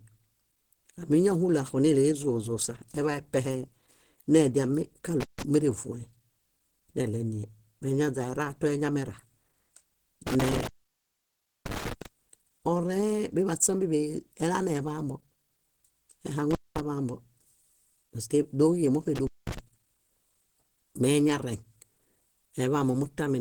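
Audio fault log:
Throughout, Opus compression: the speech sounds muffled and hoarse, with plainly audible grainy roughness, though the bandwidth stays full. This likely comes from Opus coding in its hybrid speech mode at a low rate, around 16 kbps, which spends few bits on detail.
5.20–5.43 s, 10.27–12.06 s, 16.51–16.80 s and 19.16–19.59 s, intermittent contact: the sound drops out or breaks up, with crackle at each edge and hiss in the gaps. A loose connection opens for about 144 ms, 983 ms, 212 ms and 203 ms respectively.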